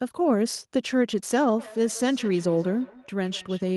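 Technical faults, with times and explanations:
1.59–3.76 s, feedback echo between two devices: From 1.59 s the speech returns as a faint repeat, roughly every 150 ms, until the clip ends. Its loudest point is about 22 dB below the speech. The repeat sounds thin and ringing. A second device in the same room is playing this call aloud, and this microphone picks that playback up again. The local echo canceller only removes its own device's output, so the delayed copy gets through.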